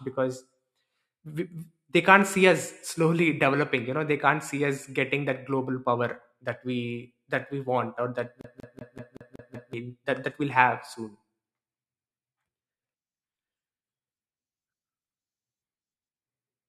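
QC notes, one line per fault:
8.41 to 9.73 s: CD stuck on one turn. Right after "we want or that", one slice of speech about 0.19 s long plays seven times over. A brief mute marks each jump. The laser keeps falling back one track, giving a fast, even stutter before "that that".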